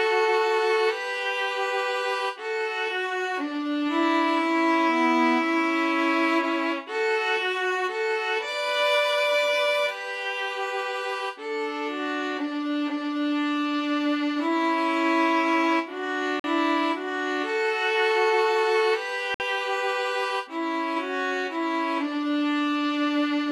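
Brief silences of 46 ms and 56 ms cut in at 16.40 to 16.44 s and 19.34 to 19.40 s before the sound resumes. These are likely Bluetooth stalls, where the headphone buffer emptied while delayed packets were resent.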